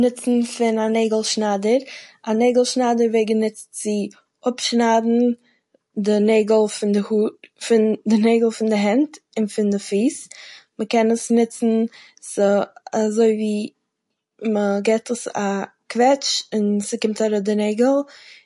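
Throughout, the speech sounds watery and swirly with smeared consonants, likely MP3 compression near 48 kbps; a spectrogram shows nothing above 11.3 kHz and flickering high-frequency patches.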